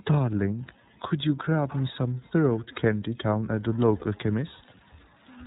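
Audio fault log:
Throughout: iLBC codec. The whole thing is squeezed into narrowband, so nothing above 4 kHz survives and the sound has that closed-in phone quality. Each frame's excitation is coded on its own, which leaves the speech clear but a bit rough and synthetic, and the codec damage is plainly audible here. The character fits iLBC's 13.33 kbps mode with 30 ms frames.
1.07–1.11 s and 3.99–4.03 s: lost iLBC frames. Each time a single frame, about 30 ms, goes missing. The decoder covers the hole by repeating the last pitch cycle mixed with noise, so you hear a brief held, slightly buzzy vowel-like smear instead of a hard dropout. Because iLBC frames don't depend on their neighbours, the speech snaps back cleanly right after each gap.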